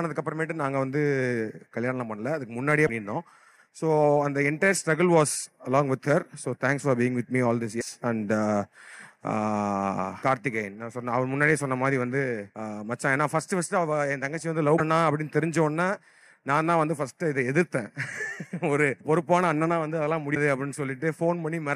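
At 2.86, 7.80, 14.77 and 20.34 s the audio jumps ahead with a brief glitch lasting 20 to 30 ms, roughly one frame of about 26 ms. The likely cause is a broken MP3 bit reservoir: frames were dropped from the stream, so the frame after each gap reached back for borrowed data and decoded bytes that belonged to a different frame. The result is a short stretch of corrupted sound at each splice.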